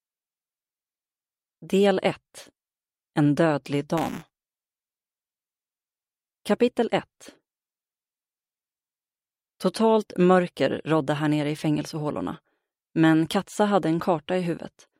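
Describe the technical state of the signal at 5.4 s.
At 5.4 s the sound carries a steady robotic buzz at 200 Hz, a hard rattle riding on the signal that disappears wherever the signal falls silent. This is buffer tearing, running from 3.97 s to 5.48 s. The writing and reading positions in the ring buffer have drifted until they cross inside every period. A small slice of each buffer, about 7%, is stale audio from around a hundredth of a second earlier, with abrupt joins on either side. Those repeating seams produce the buzz, and its rate fits a buffer period of 5 ms.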